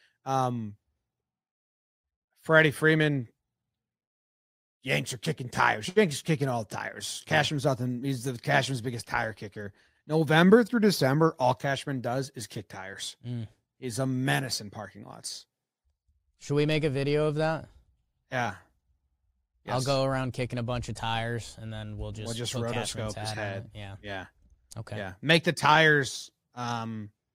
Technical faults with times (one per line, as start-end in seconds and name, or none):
none